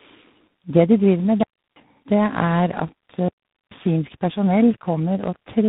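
The whole clip carries tandem speech coding. The speech passed through two speech coders in a row, and each one recoded what the last had already damaged. Nothing remains above about 3.9 kHz, so the speech sounds muffled. It is also rough and warbly, worse than a single coder would make it. The character fits a low-rate CELP coder followed by an ADPCM stage.

At 1.43 s, just after "de driver med", a digital wireless dropout begins. The receiver lost too much data and muted. The sound cuts to near silence for about 0.33 s, until 1.76 s. A second dropout runs from 3.28 s to 3.71 s, about 0.43 s. Both are clean holes. The fades are very short, and there is no noise burst on either side.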